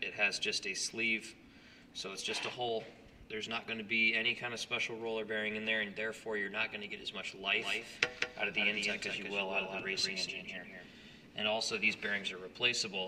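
The audio carries a doubled audio track from 7.54 s to 11.16 s: a second full-band copy of the same material trails the original by roughly a fifth of a second, sitting around 5 dB below it, and it cuts in and out abruptly at those times. The likely cause is the signal being picked up again through a slower path, or an edit leaving two copies out of step. Unlike room echo or reverb, the repeat has no decay and no added colour.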